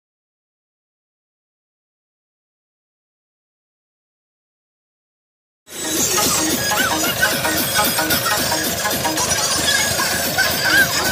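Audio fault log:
No fault to log in this audio.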